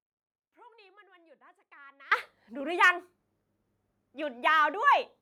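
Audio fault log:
0.00–2.12 s, audio dropout to a faint residue: it's already under way at the start, leaving only a faint leak about 25 dB down, likely a broken path with a live input.
2.83–2.90 s, microphone overload: peaks push about 2 dB past the limit with a small share of samples flattened, giving a brief harsh crackle, likely from input gain set too high.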